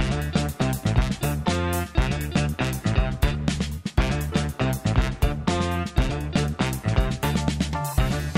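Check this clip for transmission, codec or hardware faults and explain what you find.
No faults detected here.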